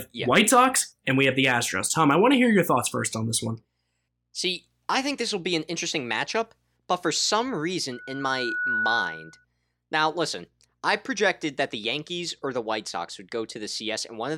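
A speech recording with loudspeaker feedback squeal from 7.92 s to 9.45 s, starting after "matchup but for some" and gone before "now listen I projected". A single tone at 1.5 kHz rises over roughly three quarters of a second until it is about as loud as the speech. The microphone is picking up the loudspeaker it feeds, so gain at that one frequency runs away. The swelling onset sets it apart from a steady interfering whistle or hum, which would start at full level.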